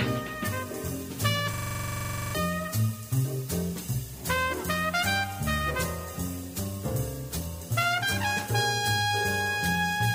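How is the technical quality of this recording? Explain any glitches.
The recording has one clear glitch. From 1.54 to 2.35 s there is a system hang loop. The system stalled while the hardware kept replaying one 42.67 ms buffer, which suggests a 2048-sample buffer. The result is a 23.4 Hz machine-gun stutter, and roughly 0.7 s of audio is lost.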